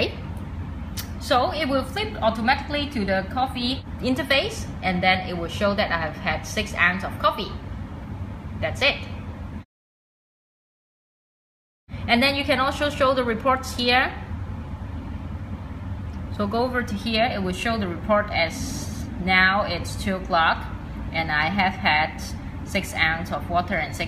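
Nothing is technically wrong with this audio.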